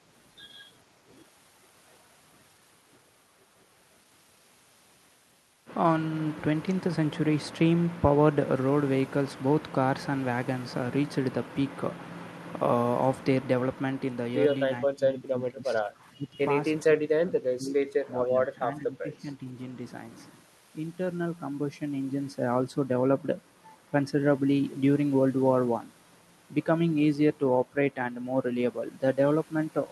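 Speech in which the talker dips in bursts at 14.84–15.97, 16.16–16.36, 16.84–18.08, 18.24–18.6 and 18.76–19.56 s, by up to about 30 dB. This is speech suppressed in double talk, likely an echo canceller turning down the near talker while the far side spoke.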